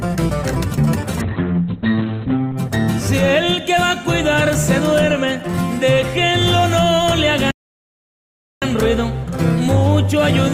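A call bitrate drop runs from 1.22 to 2.63 s. The encoder's rate falls from 32 kbps to 8 kbps and stays at its lowest for 1.35 s, so the audio is coded far more coarsely. The audio bandwidth shrinks from 20 kHz to 4 kHz, stripping the top end. Through this stretch the sound turns muffled and rough and watery, then regains its brightness and clarity once the rate climbs back.

A playback stall follows at 7.51 s and lasts 1.11 s, ending at 8.62 s. The output drops to silence partway through the sound, cutting it off abruptly, and then resumes after the gap. The likely cause is the player running short of audio data or its output thread being held up, so nothing reached the device until it recovered. It is heard as a hard, unexpected hole in the flow.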